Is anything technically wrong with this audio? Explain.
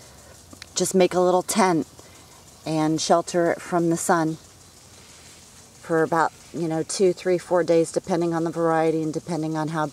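No, nothing technically wrong turns up here; the audio sounds steady and intact all the way through, with nothing that calls for a fix.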